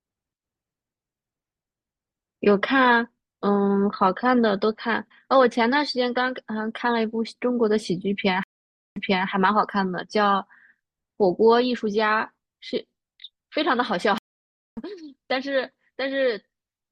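Speech with two stream reconnects, where the connection dropped and a fresh decoder restarted mid-stream: at 8.43–9.28 s about half a second of silence, then 0.32 s is repeated; at 14.18–14.79 s, 0.59 s of silence, then roughly 0.4 s is skipped.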